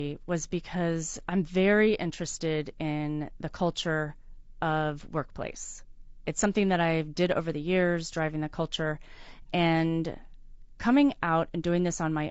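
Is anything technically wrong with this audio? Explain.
Yes. Throughout the speech, the voice sounds rough and grainy, with noise filling the gaps between harmonics and a dull, synthetic top band. This is likely low-delay AAC compression at a low bitrate: coarse quantization at 32 kbps leaves noise between the pitch harmonics. Unlike steady background noise, the grain tracks the voice.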